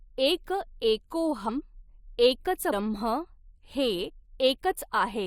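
Compressed frames skipped twice: the decoder never played runs of whole frames, consistent with a frame length of about 21 ms. At 2.72 s, roughly seven frames drop out, and the speech jumps ahead by around 150 ms. From 4.08 to 4.10 s, about three frames go missing, losing some 70 ms. At each join the speech lurches forward.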